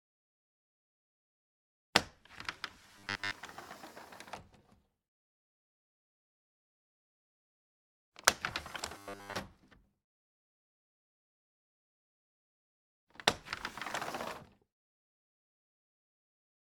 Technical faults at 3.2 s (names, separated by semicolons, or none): robotic sound from repeated short buffers